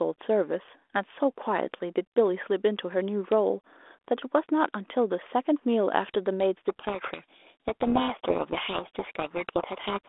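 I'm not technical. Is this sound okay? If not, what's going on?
No. A codec payload misread starts at 6.66 s and lasts to the end, at 10.08 s. The two ends of the phone line disagree about the order of bits in each small chunk of audio, so the receiver rebuilds garbage, and the speech drowns in harsh, rasping distortion.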